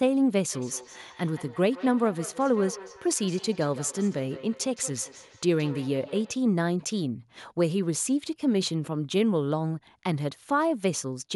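From 0.53 s to 6.47 s, each bit of speech comes back as a faint, hollow repeat roughly every 150 ms, peaking at about 17 dB below the speech. This is feedback echo between two devices: two devices in the same room are on one call, one plays what the other's microphone sent, and that microphone picks it up again. Each device's echo canceller removes only its own playback, so the returning sound slips through.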